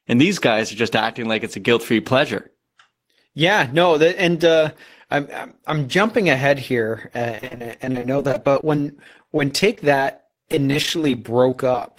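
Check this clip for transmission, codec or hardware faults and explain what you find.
One transmission fault is present. From 7.32 s to 11.91 s, after "jumping ahead here uh", the speech turns choppy and robotic. This is repeated packet loss: dozens of brief holes, none over 33 ms, each patched by stretching the preceding sound, covering roughly a sixth of the stretch.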